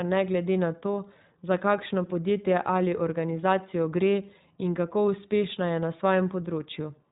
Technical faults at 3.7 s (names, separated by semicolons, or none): iLBC codec